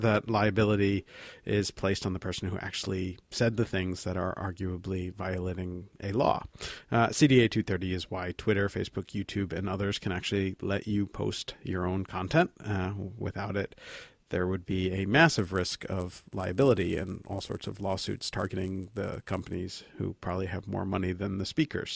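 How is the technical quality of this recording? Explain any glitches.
The recording has one glitch. From 15.39 to 19.55 s, a 100 Hz buzz rides on the speech, present only with signal. This fits a resampler restarted on every block of about 10 ms, leaving a small error at each block edge.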